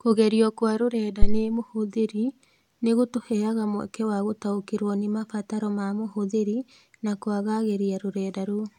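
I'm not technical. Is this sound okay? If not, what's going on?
No. At about 1.22 s, just after "kwa rũrenda", there is a phantom power thump: a deep, dull bump lasting until about 1.46 s, with the boom itself dying away within roughly 50 ms. It happens when the microphone's power supply is switched on or off while recording. The sudden electrical jump passes through the input's capacitors and comes out as a low thud. The speech resumes with "mũhũthĩri nĩ gũtũheaga mweke".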